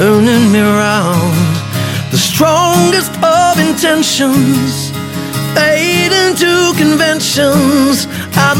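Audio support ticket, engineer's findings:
Hard clipping, whole clip. Crackle on peaks. Overload about 6 dB past full scale. Tops cut flat on a small fraction of samples, near one to two percent. Probable component: gain stage or converter ahead of capture. Flattened peaks add high harmonics.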